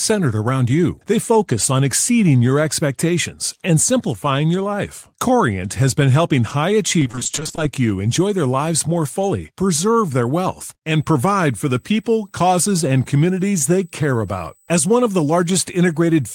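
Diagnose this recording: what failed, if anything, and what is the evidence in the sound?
The network path failed with repeated packet loss (robotic sound) from 6.99 to 7.59 s. Fifteen short gaps, the longest 20 ms, left half that span concealed by extending the previous sound, so the speech turns choppy, with pieces missing.

From 10.87 s to the end, USB whine shows up at the analogue wiring stage: a fixed tone at 8 kHz, strongest at its 16 kHz harmonic, roughly 35 dB below the speech. USB microframe current is leaking through the power or ground.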